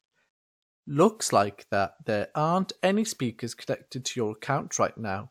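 No technical faults can be heard anywhere in the speech. There is no moment in the recording that needs a timestamp or an explanation.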